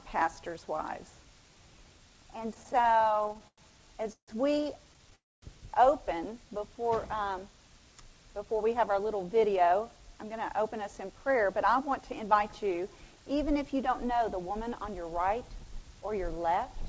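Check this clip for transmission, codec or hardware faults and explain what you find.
Three network-related faults are audible, all typical of audio arriving over a call link. The sound is band-limited with nothing above 8 kHz, which fits the G.722 codec at 64 kbps.

Repeated stalls (stutter), 2.54 to 4.30 s: The sound catches and drags in a rapid series of 17 small hangs. Each hang prolongs the preceding sound, and the longest lasts 152 ms. Together they fill about 0.42 s, roughly a quarter of that span, and nothing is skipped. The jitter buffer kept running dry because packets arrived late or too slowly, so the receiver stretched the last audio to cover each shortfall.

Call audio freeze, 5.15 to 5.44 s: The sound stops for 0.27 s. A brief continuation of the last sound fades to about 0.23 s of silence, then the audio resumes exactly where it left off, so nothing is lost and a gap has been inserted. 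The likely cause is packets held up in transit, which emptied the jitter buffer and pushed the playback delay back by 269 ms.

Jitter buffer speed-up, 8.38 to 12.97 s: Over these four and a half seconds the sound runs about 7% fast, at 107% speed, with its pitch unchanged, and it feels slightly hurried. The buffer had built up more audio than its target, as happens after a backlog of packets arrives at once. To reduce the delay, the receiver repeatedly cut out tiny pitch-period-length slices, about a third of a second in total.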